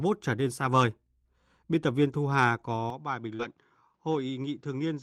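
Input switched to a poorer device, from 2.90 s to the end: the sound abruptly turns duller and a few decibels quieter, with nothing above 7.6 kHz and a faint new noise floor well beneath the speech. There is no gap at the change, and the likely cause is the recording moving to a narrower-band microphone or headset mid-clip.

Short concealed packet loss, from 3.35 to 3.41 s: about 40 ms of audio never arrived in time, so the decoder extended the preceding sound for roughly 37 ms before blending back. It comes across as a brief smear or wobble on the speech.

Lost packet rebuilt from error correction, from 3.39 to 3.45 s: 40 ms was replayed from the low-bitrate backup copies carried in the following packets, which fits two lost packets. Nothing drops out, but that stretch sounds rougher and noisier than its surroundings.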